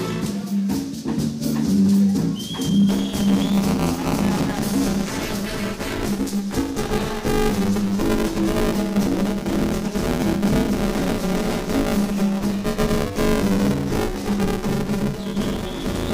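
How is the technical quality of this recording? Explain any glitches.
The recording has one fault, buffer tearing, starting at 2.89 s and continuing to the end. From that point a rigid, robotic buzz at 200 Hz rides on the sound wherever there is signal. The write and read positions in the playback ring buffer have slipped past each other, so in every 5 ms period most of the buffer replays audio from roughly 15 ms earlier. The hard joins on either side of that stale stretch produce the 200 Hz rattle.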